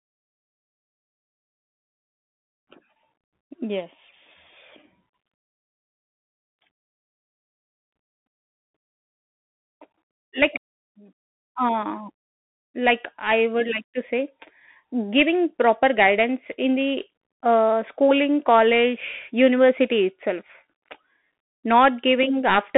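Speech, carried throughout by a Bluetooth CVSD headset codec. The band is squeezed to roughly 200 Hz to 3.5 kHz with nothing above 3.8 kHz, so it sounds like a phone line. Unlike a clean narrowband telephone channel, it carries a granular hiss riding under the speech, and the s sounds turn scratchy. That comes from a one-bit up-or-down coder whose adaptive step can't keep pace with loud high sounds, as in a 64 kbps headset link.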